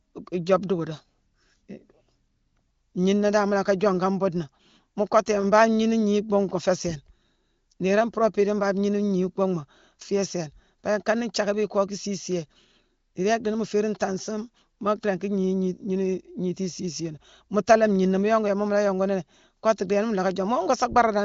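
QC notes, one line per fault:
No fault to note.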